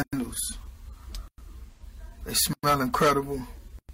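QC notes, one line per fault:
1.71–1.83 s, AAC frame loss with concealment: about 85 ms, which fits two lost frames, is refilled from the previous spectrum, giving a smeared, phasey patch rather than a silent dropout.
2.36–3.17 s, hard clipping: peaks driven about 10 dB past full scale are cut flat, adding harsh high harmonics that track loud moments, unlike steady codec noise.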